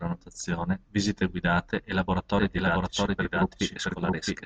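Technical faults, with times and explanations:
2.39 s to end: doubled audio track. A second, slower capture path is likely feeding in, so from 2.39 s a copy of the speech, about as loud as the original, trails it by about 0.7 s, starting abruptly and lacking decay or room colour.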